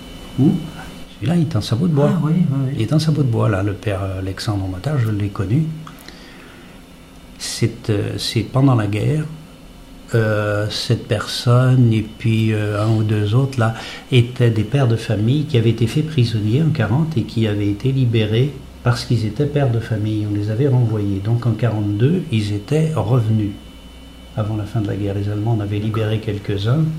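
Nothing stood out as a technical problem on listening to the clip.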